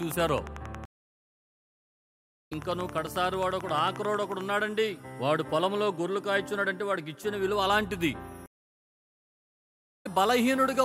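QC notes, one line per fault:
0.03–4.42 s, train of clicks: a regular ticking at 11.2 clicks per second, roughly fifty in all, peaking about 5 dB above the programme and audible through the silent gap too. The even shape and pace point to likely interference from nearby equipment or a faulty connection or power supply.
0.85–2.52 s and 8.46–10.07 s, stream reconnect: the audio drops out for 1.61 s and 1.57 s, then resumes later in the material, by roughly one and a half seconds and one second. The broken connection and fresh decoder skip the lost portion rather than replaying it.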